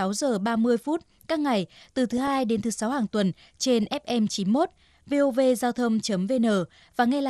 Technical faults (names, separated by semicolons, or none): MP2 compression; DAB burbling